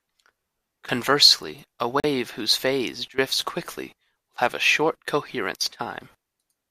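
At 2.00 s a short Bluetooth stall breaks the speech. The likely cause is radio interference delaying packets on the wireless link, so the headphones' buffer emptied before the retransmitted audio arrived and playback had nothing to play. What you hear is an abrupt drop to dead silence lasting about 39 ms, ending at 2.04 s, after which the speech resumes with a hard restart rather than a fade back in.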